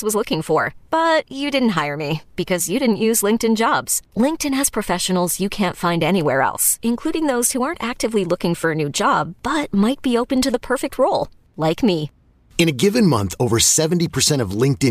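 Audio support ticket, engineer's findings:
Nothing stood out on listening to the speech, and there is no symptom to log against any component.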